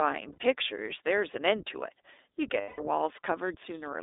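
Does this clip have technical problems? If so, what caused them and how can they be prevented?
Yes. The whole clip is speech carried through the iLBC codec. The band runs only from about 300 Hz to 3.7 kHz, so nothing above that survives, and the voice has the slightly rough, synthetic edge of a narrowband coder that builds each frame's excitation independently. The amount of damage fits iLBC's 15.2 kbps mode with 20 ms frames. To prevent it, carry the call over a wideband codec such as Opus or G.722.

There are also lost iLBC frames at 0.32 to 0.38 s, a 60 ms gap, and at 2.60 to 2.80 s, a 180 ms gap. In each gap, packets failed to arrive and the decoder filled the hole by repeating the last pitch cycle mixed with noise. This is heard as a held, faintly buzzy vowel. It fades across the longer gap, and the voice returns cleanly right afterwards because each iLBC frame stands alone. To prevent it, reduce packet loss with a better network path, QoS marking or forward error correction.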